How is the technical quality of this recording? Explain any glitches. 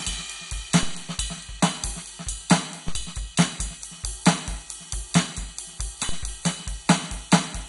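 Technically it's in rough shape: the music carries heavy codec damage all the way through, and there are three separate low thumps on top.

The constant problem sounds like MP2 compression, likely from a low-bitrate MPEG Layer II encode. The bit budget points to around 56 kbps, too little for the 32 sub-bands. Everything above about 11.2 kHz is gone, which makes the music dull. The bands that survive are coarsely quantised, and they flicker in and out. That gives it the gurgly, grainy texture you'd recognise from cheap digital radio.

The glitches are DC steps at 0.83 s, 2.88 s and 6.09 s. At each one the waveform's zero line suddenly jumps to a new offset, as if a converter recalibrated or an offset input got switched in. A slow high-pass around 2 Hz then pulls the baseline back toward zero over a fraction of a second. You hear each jump as a short low thump or click, and the music itself carries straight on underneath.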